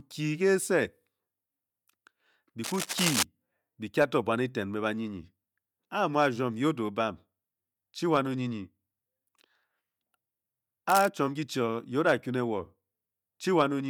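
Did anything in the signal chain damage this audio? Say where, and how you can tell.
Yes. In the analogue wiring, cable scratch noise appears from 2.63 to 3.23 s, before "be kye", and from 10.89 to 11.08 s, before "ki chi o ye", at about 5 and 10 dB below the speech. The dense, irregular rustle likely comes from a worn connector being moved, unlike a single click or a regular dropout.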